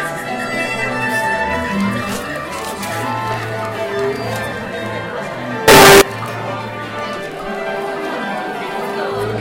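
Float read as integer, from 5.68 to 6.01 s: the sound turns into a harsh, near-square blast at an almost fixed, high level, likely 32-bit float samples decoded as 32-bit integers.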